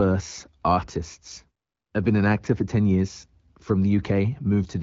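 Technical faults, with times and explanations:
No technical faults are present, so there are no times or explanations to give.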